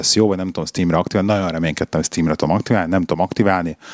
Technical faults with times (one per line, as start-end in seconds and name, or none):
none